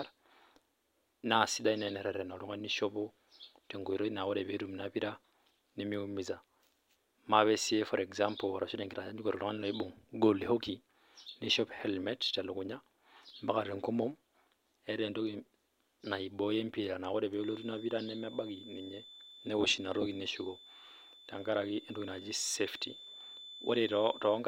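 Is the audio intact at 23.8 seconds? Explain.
No. At 23.8 seconds a feedback whistle sits behind the speech. It runs from 17.31 s to the end of the clip at 24.48 s. It is a thin, steady tone near 3.5 kHz, about 20 dB below the speech, swelling and fading slowly in level. The likely cause is a loudspeaker-to-microphone loop held just at the edge of feedback. One high frequency keeps ringing there without building into a howl.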